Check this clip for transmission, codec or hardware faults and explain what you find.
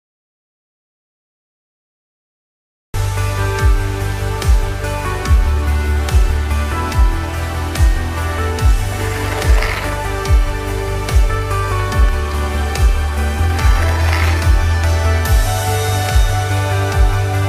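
One fault is present: an audio dropout to silence at the very start. From 0.00 s to 2.94 s there is nothing at all, not even room tone, and the sound then comes in abruptly, already mid-flow, as if joined partway through. Because the silence is already under way when the clip begins, the input was likely lost through a disconnected device, failed link or stray mute, with the recorder writing silence until the signal returned. Whatever sounded during those first 2.9 seconds is gone.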